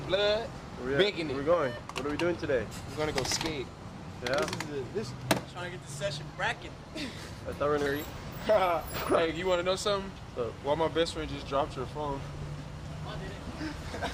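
Nothing is technically wrong with this audio.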